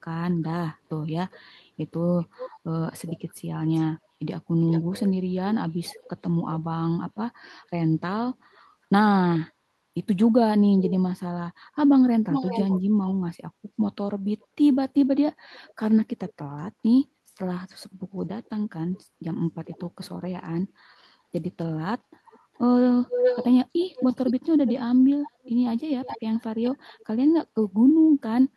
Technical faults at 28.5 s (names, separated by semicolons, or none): none